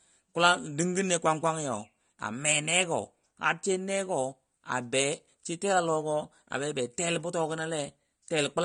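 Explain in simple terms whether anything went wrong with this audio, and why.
AAC compression, throughout the speech: nothing above 9.7 kHz remains, so it sounds dull and smeared, likely because the encoder threw away detail to save space.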